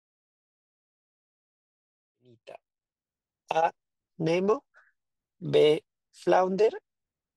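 Speech clip with no technical faults to report.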